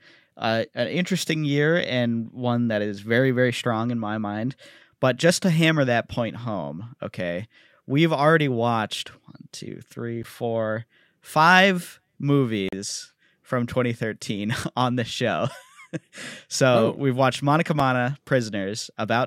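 Speech, marked by two blocks of digital silence and one gap from a likely Bluetooth dropout. At 10.23 s, between "watched one two three" and "four five", the sound cuts cleanly to silence for 11.6 ms, which fits a 512-sample buffer left unfilled in time. A shorter 5.8 ms block at 17.80 s fits 256 samples. With no fade at either edge, each gap registers as a tick or dip. From 12.69 to 12.73 s a 40 ms hole opens, about the span of three lost packets, likely from a Bluetooth dropout. It is several times longer than the silence blocks, and the speech resumes further along, as though it had kept playing through the gap.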